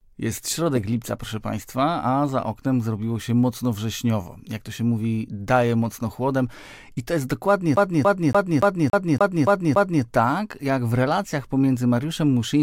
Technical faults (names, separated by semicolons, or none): CD stuck on one turn